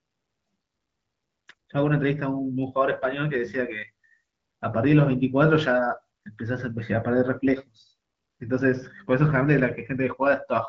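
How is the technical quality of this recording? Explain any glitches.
No glitches can be heard.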